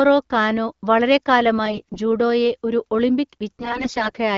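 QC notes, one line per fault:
1.65–1.99 s, AMR bit errors: the speech goes hoarse and gargly for about a third of a second, just before "ജൂഡോയെ ഒരു". Pitch and level hold roughly steady, but the texture turns scratchy. Flipped bits in the less-protected part of the frames got past the checksum, so the excitation pulses land in the wrong spots and the fine pitch, gain and spectral values drift.
3.59–4.18 s, AMR bit errors: same thing, but rougher and longer, roughly twice the error density. The wideband codec's light coloration sits underneath.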